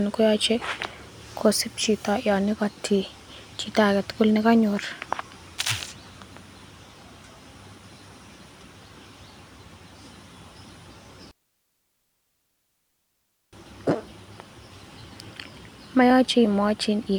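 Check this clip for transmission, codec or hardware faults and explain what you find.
Listening through the recording turns up no faults. There is nothing to report at any point in the speech.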